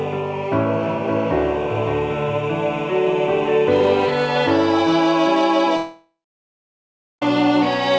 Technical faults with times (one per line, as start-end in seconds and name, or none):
0.83-4.05 doubled audio track
5.77-7.22 long network dropout